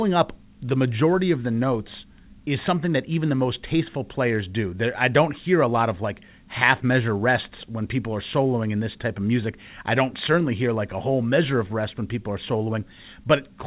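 No technical faults can be heard in this speech clip. It has passed through a call path whose codec sounds like G.711 A-law, with nothing above 4 kHz, giving the narrow, telephone-like band expected of that codec.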